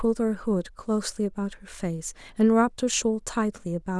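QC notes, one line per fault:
No problems turned up anywhere in this speech recording, so there's nothing to log here.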